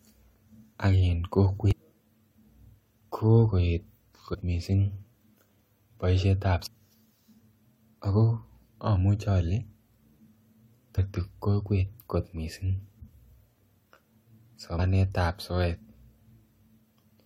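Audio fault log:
1.71–1.73 s, 4.33–4.35 s, 6.65 s, 10.97 s, 14.78 s: damaged data in a compressed stream. Brief glitches, the first right after "ak en" and the fourth just before "kokwet kot missing", as the decoder misreads corrupted frames and loses sync.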